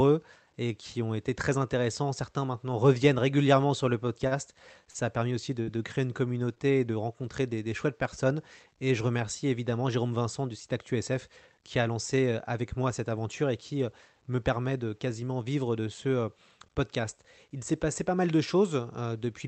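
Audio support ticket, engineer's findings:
Short stall from a late packet at 4.27–4.34 s, 4.90–4.97 s and 6.55–6.60 s. Sound held too long, slight buzz or dip. Jitter buffer ran empty; last sound stretched about 38 ms, 40 ms and 17 ms, then resumed. Little or nothing lost.

Short concealed packet loss at 5.63–5.70 s. Brief smear or wobble. About 40 ms never reached the decoder in time. Concealment extended the preceding sound about 44 ms, then blended back into the real audio. Band-limited to 8 kHz, consistent with a 32 kbps Opus call path.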